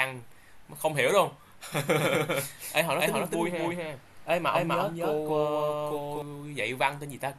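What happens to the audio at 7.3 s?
At 7.3 s the speech carries on intact, with nothing audibly wrong at that moment.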